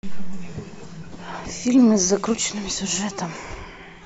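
A speech recording with nothing technically wrong with it.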